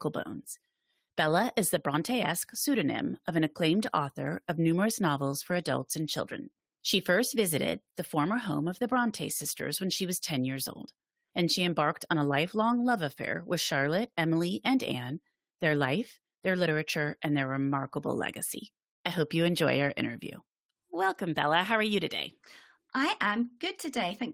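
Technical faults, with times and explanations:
No technical faults can be heard; the speech signal stays continuous and stable over its whole run.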